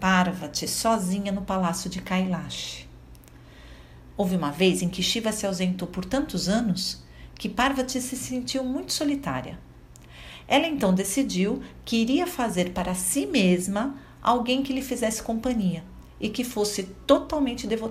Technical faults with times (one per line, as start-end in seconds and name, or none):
none